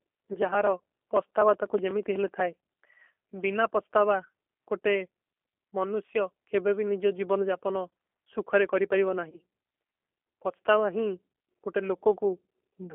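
Throughout, the speech passes through a G.729 codec that rebuilds it from a compact vocal tract model, fitting an 8 kbit/s stream. The result is plainly rough and synthetic, confined to about 300 Hz to 3.4 kHz.

At 0.33 to 0.38 s, 9.30 to 9.39 s and 11.33 to 11.35 s, VoIP packet loss concealed by the speech codec drops about 20 ms of audio, consistent with a single lost packet each time. The decoder extends its last frame into a brief buzzy tone or coloured noise that fades, and the sound stays weak or distorted just afterwards.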